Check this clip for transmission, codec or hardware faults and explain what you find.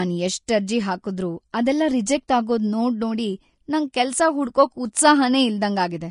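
Two kinds of fault run through this speech clip: constant lossy-codec damage and two brief pre-echoes.

Vorbis compression, throughout: nothing above 10.5 kHz and a coarsely quantised treble leave the speech hissy and grainy, likely from Vorbis at a low bitrate around 34 kbps.

Pre-echo at 1.52 s, after "ಅರ್ಜಿ ಹಾಕುದ್ರೂ", and at 2.28 s, after "ಅರ್ಜಿ ಹಾಕುದ್ರೂ ಅದೆಲ್ಲ": block-spread quantisation noise leaks 14 ms and 11 ms ahead of sharp attacks, giving a short hiss before softened onsets.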